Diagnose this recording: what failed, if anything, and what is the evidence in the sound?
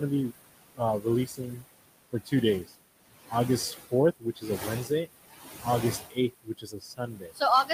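The background noise keeps dropping away in the gaps and swelling back under the speech. These are noise suppressor artifacts from the call-processing stage, present through the whole clip. The suppressor is pulling the bands it judges to be steady noise down by about 19 dB, frame by frame. The room noise underneath sits only about 11 dB below the speech.

The same stage is also causing speech cut by the noise suppressor. Stretches of the speech go faint or sound swallowed at 0.76–1.65 s, 2.11–2.32 s, 2.64–2.74 s, 3.91–5.08 s and from 6.1 s to the end. Within the first and fourth spans only a few tenths of a second are affected. The drops reach about 20 dB, shallower at around 12 dB near 2.7 s. The suppressor misread soft, low-level speech as noise and attenuated it along with the background.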